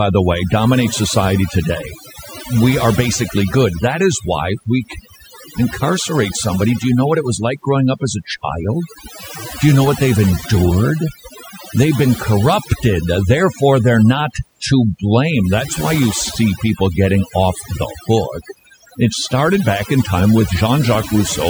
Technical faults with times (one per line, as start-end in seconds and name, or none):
0.00-21.50 overdone noise removal